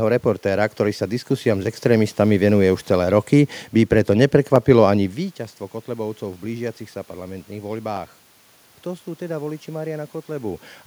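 A single sharp click lands at 4.56 s in this speech recording, just after "celé roky by preto", showing as a thin vertical line across the spectrum. The likely cause is dropped samples: a fraction of a millisecond of the stream went missing, so the waveform jumps abruptly from one value to a later one. The gap is far too brief to remove any audible sound, leaving only the click. The room noise and the shifts in level near 5 s and 10.5 s, where the talker moves relative to the microphone, come from the recording itself.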